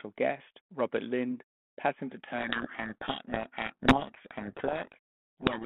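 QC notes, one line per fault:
2.38 to 5.65 s, codec payload misread: from 2.38 s to the end, the speech is buried under harsh, gritty distortion. The G.726 stream, which sounds like the 32 kbit/s rate with its 200 Hz to 3.4 kHz telephone band before the fault, starts being unpacked with the bits of each code word in the wrong order. The decoder accepts every frame as valid, but the differences it rebuilds are wrong, so only a rough trace of the speech survives in the noise.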